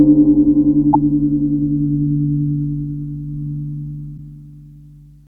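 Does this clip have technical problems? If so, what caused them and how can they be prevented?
Yes, two short blips at 0.90–0.95 s and 4.14–4.18 s, caused by damaged data in a compressed stream: corrupt frames made the decoder lose sync and resync. Verify checksums and use reliable transport so the stream arrives intact.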